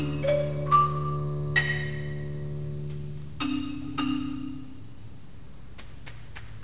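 From start to finish there's aliasing: the sound points to a drop to about an 8 kHz rate with no filtering first, so anything above 4 kHz folds back down as unrelated tones, maybe 20 dB under the main signal. It gives the top end a gritty, metallic edge.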